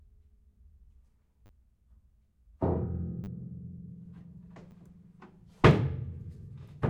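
Sounds, with repeated buffer faults at 1.46 s, 3.24 s and 4.71 s. A 10 ms slice replays three times, three times, then once, as a click or brief buzz. New audio arrived late.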